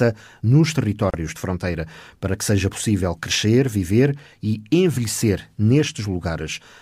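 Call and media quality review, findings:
Gap at a join of encoded pieces, 1.10 to 1.14 s, about 36 ms of silence just before "de fronteira para que". Component: segment concatenation after encoding. Mechanism: encoder start-up delay and last-frame padding left untrimmed at the join. Waveform: flat dropout with abrupt, slightly smeared edges. Spectrogram: full-band vertical blank stripe. The speech resumes where it stopped.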